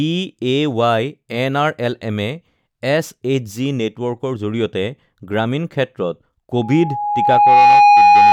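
Speech recording with loudspeaker feedback squeal from 6.54 s to the end at 8.33 s: an 826 Hz tone swells over roughly a second to about 10 dB above the speech.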